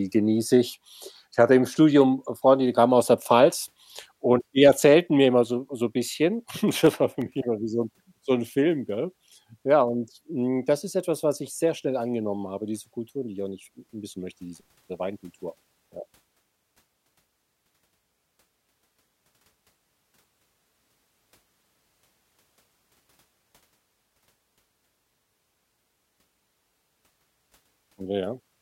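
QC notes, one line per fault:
6.69–7.39 s, CD scratch ticks: a disc scratch destroyed more data per revolution than error correction could rebuild, so the player interpolated or muted the damaged samples. This leaves five tiny ticks, each under about 2 ms, repeating roughly seven times a second.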